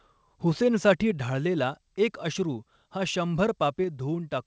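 At 1.11 s the whole speech clip drops by about 4 dB in a single step: the voice and the background both get quieter at once, with no fade. That's the sound of a microphone volume stepped down, most likely the call software deciding the input was running too hot and cutting the device's input level in one move. Throughout, the audio runs through the call path, which tops out around 8 kHz.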